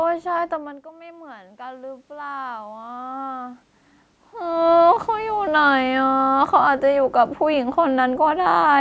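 Right after the talker drifts back around half a second, the level drops by about 19 dB. From 0.89 to 3.68 s the automatic gain rising kicks in, creeping its gain up about 9 dB, so voice and room noise swell together.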